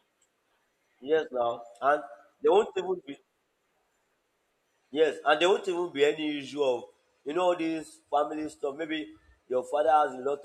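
No technical faults are audible.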